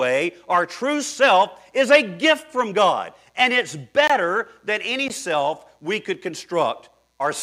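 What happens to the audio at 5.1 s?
At 5.08 s a block of digital silence interrupts the speech. The playback path likely failed to deliver about 17 ms of samples in time, so that stretch was filled with zeros instead of sound. Because the signal drops straight to zero and returns without any fade, each edge produces a sharp discontinuity, heard as a brief tick or tiny hole between "than any" and "self we could".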